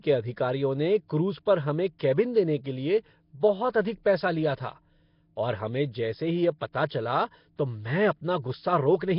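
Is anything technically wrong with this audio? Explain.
Yes. The speech carries a rough, hissy haze and a smeared, underwater quality throughout, with nothing above 5.3 kHz. This is likely Nellymoser compression: the codec codes short blocks at a fixed, very low bit budget, fills starved bands with noise, and the heavy damage fits a rate near 22 kbps.

Pre-echo occurs at 1.99 s and 6.89 s, and again from 7.56 to 7.59 s. A brief hiss runs ahead of each sharp onset, spreading about 12, 14 and 25 ms, and the attacks sound soft. The codec spreads block-wide quantisation noise into the quiet moment before each attack.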